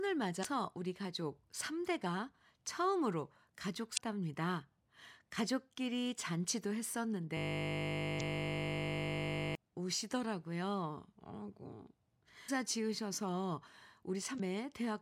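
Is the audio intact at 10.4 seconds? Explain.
Yes, the speech at 10.4 seconds plays through intact, with no audible fault at that moment.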